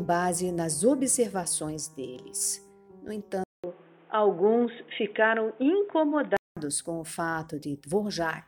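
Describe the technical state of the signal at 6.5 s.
At 6.5 s the signal is still in the span from 3.44 s to 6.57 s where the input likely switched to a poorer device. After a 200 ms gap, the band stops at 3.8 kHz, dulling the sound at unchanged level, with a new noise floor roughly 35 dB down.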